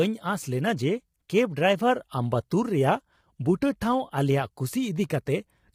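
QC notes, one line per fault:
throughout: low-delay AAC compression, likely AAC-ELD at around 24 kbps; speech is rough and grainy, with noise between pitch harmonics that short frames resolve poorly, rather than warbling.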